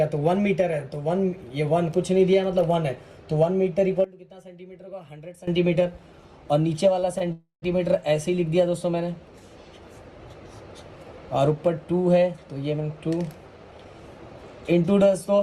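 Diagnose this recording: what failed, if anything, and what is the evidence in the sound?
From 4.04 to 5.47 s the level drops by about 18 dB and the centre of the image nearly disappears. What remains sounds like the difference between the channels. This points to one channel inverted, likely a polarity swap in the analogue wiring or a channel path. When the two channels are summed to mono, the material they share cancels. Only the small mismatch between them is left until normal polarity returns.

Two short stalls from a late packet sit in the network and jitter buffer stage. The first runs from 6.99 to 7.04 s and is held for about 28 ms. The second runs from 7.18 to 7.22 s and is held for about 21 ms. Each time, the buffer ran dry and the receiver stretched the last sound. Playback then resumed at the same point. Nothing is lost, but the sound lingers briefly with a slight buzz or dip.

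A call audio freeze follows from 7.32 to 7.64 s, close after the stalls. The last sound is carried on for roughly 300 ms as a fading buzz or hiss. That ends in about 130 ms of silence before the audio resumes where it stopped. The likely cause is packets held up on the network path, which emptied the jitter buffer. The result is an inserted gap, not missing material, and it adds about 300 ms of delay.

From 13.64 to 14.01 s the audio runs about 15 percent fast while the pitch stays the same. It sounds hurried. This is a jitter buffer speed-up at the receiver. Holding more audio than it aims for, the buffer trimmed it back. It cut many short pieces, each one or a few pitch periods long, in quick succession. Together they removed roughly 70 ms.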